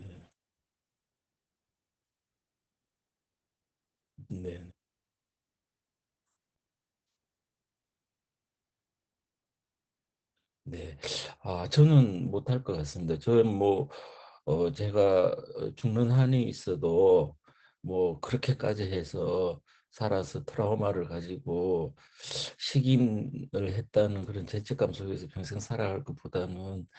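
Opus voice compression runs throughout this speech clip. The SILK coder, at about 12 kbps, caps the band near 8 kHz and codes excitation coarsely, leaving it muffled, hoarse, slightly robotic.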